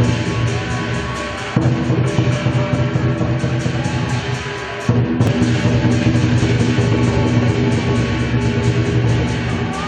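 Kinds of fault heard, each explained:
Damaged data in a compressed stream: bits of the encoded stream got corrupted, so the decoder misreads those frames and scrambles to resync. Here that gives four brief blips, each under 20 ms, at roughly 0.42, 2.74, 5.27 and 9.08 s.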